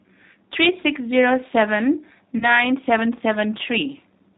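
From start to end, the speech is limited to below 4 kHz and has a slightly rough, synthetic grain, which fits an 8 kbit/s G.729 codec rebuilding each frame from a vocal tract filter and a few excitation pulses. Plain band-limiting would only sound muffled, not rough and synthetic like this.

From 2.38 to 2.65 s, VoIP packet loss concealed by the speech codec replaces about 30 ms of missing audio. The decoder stretches its last pitch and filter into a fading buzzy tone or coloured noise, and the speech stays weak and smeared until 2.65 s. A plain dropout would leave a silent gap or click instead.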